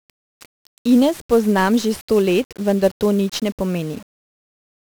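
From start to end, the speech carries heavy 1-bit DFPWM compression damage. Each sample keeps only a single up-or-down step for an adaptive level, so the coarse quantisation leaves strong broadband noise. The voice sounds fuzzy and crackly, with its treble sunk in hiss, which fits a stream of about 48 kbps. A spectrogram shows a dense noise floor across the whole band that swamps the upper harmonics, and the waveform looks grainy and jagged.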